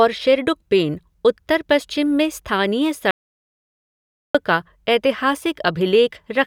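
Speech recording with an audio dropout to silence from 3.11 s to 4.35 s. The signal stops mid-flow and about 1.24 s is replaced by silence, with no room tone underneath, so that stretch of speech is lost. The likely cause is a momentary loss of input, such as a disconnected device, failed link or accidental mute, while recording continued.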